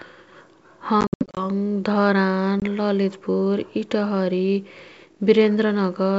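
Packet loss on the ADPCM call strikes from 1.01 to 1.46 s, with about 220 ms missing in gaps of up to 70 ms. It strikes again for 20 ms at 2.60 to 2.62 s. Each time the decoder's predictor and step size lose track. The speech cuts to hard-edged silence and comes back with brief distortion.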